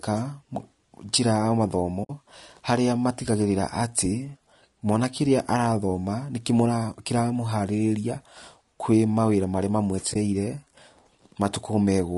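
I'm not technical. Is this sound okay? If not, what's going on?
No. All the way through, the voice sounds rough and grainy, a bit like talking through a cheap phone line. There's a hiss in between the tones of the voice, and the brightest, crispest part sounds dull or artificial. That points to low-delay AAC compression, likely the AAC-ELD kind used in video calls. It chops sound into very short slices so there's little lag, but squeezed this hard it loses detail and adds that grain.

There are also two brief drop-outs from AAC frame loss with muting. Small chunks of data went missing, and the player filled them with silence. The first is from 2.03 to 2.10 s, about 60 ms of sound gone. The second, shorter one is from 10.13 to 10.16 s, about 20 ms lost. Each sounds like a quick soft hole, faded out and back in.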